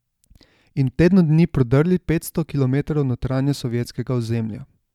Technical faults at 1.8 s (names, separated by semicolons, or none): word clock ticks